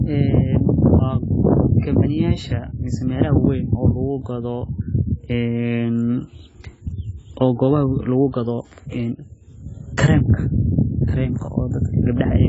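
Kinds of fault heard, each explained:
AAC compression: The speech sounds dull and smeared for the whole clip, and the damage is heavy. Nothing is heard above 7.7 kHz, so sibilants lose their crisp edge. The encoder has dropped the top band to save bits. Sustained sounds warble and fizz where spectral detail was discarded or patched over. The likely cause is AAC-LC encoding at a very low bitrate, which fits a setting near 16 kbps.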